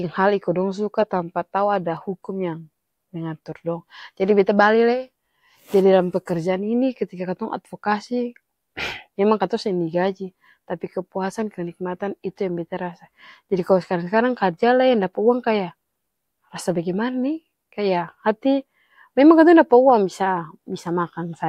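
A speech recording with one sharp click at 1.97 s, most likely from dropped samples: a fraction of a millisecond of the stream is missing, so the waveform jumps abruptly to a later value. A spectrogram shows a thin vertical line spanning the spectrum at that instant.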